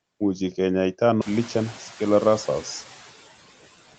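A short speech recording carrying three distinct faults, heard over a band that stops at 8 kHz, as an Opus call at 32 kbps would produce. Noise suppressor artifacts run throughout. The suppressor pulls down what it judges to be steady noise by about 12 dB, so the background dips in the pauses and swells back under the talking. This is most obvious after the room noise climbs by about 22 dB at around 1 s, leaving it only about 20 dB below the speech. That moving, frame-by-frame texture is what separates it from codec coding noise, which stays fixed to the signal rather than breathing with the pauses. At about 1.21 to 1.23 s there is a skip ahead. Roughly 0.7 s of audio disappears, and playback jumps straight to later material with no silence and no filler. A dropout or concealment would leave a gap or a smeared patch; here the two sides are simply butted together, which points to a jitter buffer discarding audio that was already queued. 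From 1.31 to 2.27 s a jitter buffer speed-up follows. Playback runs at about 107 % while the pitch stays unchanged, as short pitch-period pieces totalling about 70 ms are cut out to shed the excess delay. Because the pitch holds, this is a hurried delivery rather than a pitch shift or a resampling error.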